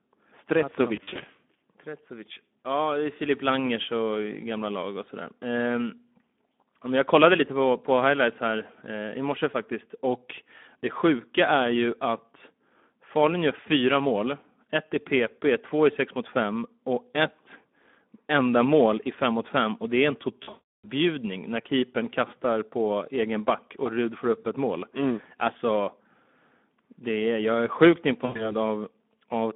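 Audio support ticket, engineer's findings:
Speex codec throughout: hoarse, noisy speech band-limited to about 200 Hz to 3.5 kHz. Starved excitation at roughly 11 kbps, so damage is plainly audible.

VoIP packet loss concealed by the speech codec: fading smears at 0.95–1.21 s, 20.43–20.85 s after "och det är en" (one gap about 340 ms), and 28.25–28.54 s after "är jag är sjukt". Decoder extrapolating pitch and filter.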